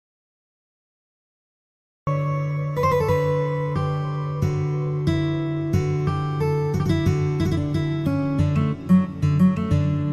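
From the first instant until 2.07 s the clip is in an audio dropout to silence: silence with no room tone or noise floor, already under way when the recording begins. At 2.07 s the sound enters abruptly, mid-flow rather than with a natural onset. The likely cause is a lost input, such as a disconnected device, a failed link or a mute, while the recorder kept writing silence, so whatever occurred in those first two seconds is gone.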